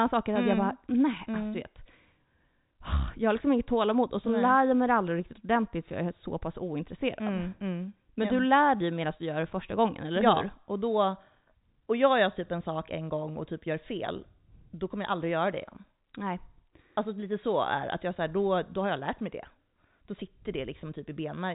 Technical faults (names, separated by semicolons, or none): none